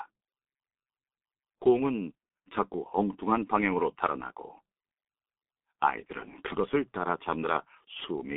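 G.723.1 codec damage runs through the whole clip. Nothing survives above 3.7 kHz and the line band sits at 200 Hz to 3.6 kHz, so the speech sounds muffled and hoarse. Consonants blur because the coarse, slowly updated voice model, which fits a 6.3 kbit/s mode, smears fast changes.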